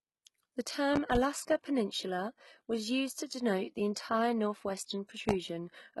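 Throughout the speech the treble sounds synthetic: sibilants come out gritty and lispy, and there is nothing above 11.8 kHz. This points to heavy HE-AAC compression, likely at a very low rate that fits about 16 kbps. The upper band is rebuilt by copying lower bands upward, so its harmonics don't line up with those below. Unlike plain low-pass filtering, the highs are still present, but they are metallic rather than missing.

From 0.96 to 1.19 s a loud pop arrives as two sharp pops in quick succession, peaking roughly 20 dB above the speech. At 5.29 to 5.32 s a single pop of similar strength follows. Each is likely a voltage step or pulse, as from a plug, switch or static discharge, added on top while the speech carries on underneath. That continuity separates these pops from a dropout or edit click, which would interrupt the sound itself.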